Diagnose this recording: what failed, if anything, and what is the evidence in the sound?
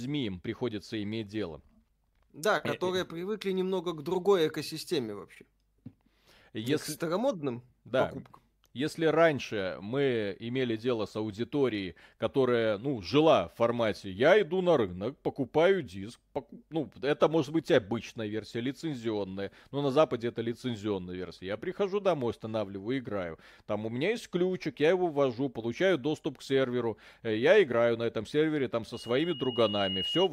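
Loudspeaker feedback squeal in the acoustic loop. From 28.93 to 30.29 s, a 2.9 kHz tone swells over about a second to roughly speech level.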